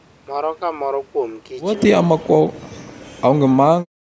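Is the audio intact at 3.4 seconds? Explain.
No. At 3.4 seconds the speech is suppressed in double talk. The fault runs from about 2.02 to 3.73 s. Over that span the speech dips and breaks into pieces, in all about a second and a half of it. The deepest cuts reach about 40 dB. The likely cause is an echo canceller that could not tell the talker from loudspeaker echo while both sides spoke, so it turned both down.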